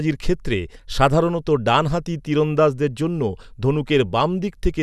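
A recording of speech with no technical fault to report. There is nothing in it that needs a time, a cause or a fix.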